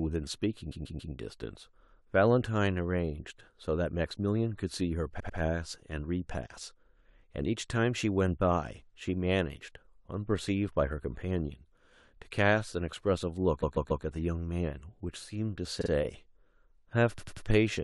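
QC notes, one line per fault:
0.71–1.13 s, 5.19–5.38 s, 13.62–14.04 s, 15.80–15.90 s, 17.17–17.45 s: repeated frames. A short chunk of the speech, 46 to 139 ms long, plays two or three extra times. That gives a stutter, and each spot gets 93 to 418 ms longer.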